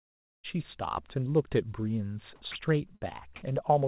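At 2.52 s the speech drops out for 40 ms and flat comfort noise fills in, likely the voice detector mistaking a quiet moment for background and cutting the sound. Then from 2.96 to 3.09 s there's a burst of packet loss: the receiver stretches the last sound for about 53 ms, fading it, and 60 ms of speech is simply gone when it picks up again. Throughout, nothing reaches above 4 kHz, which fits a G.711 call path.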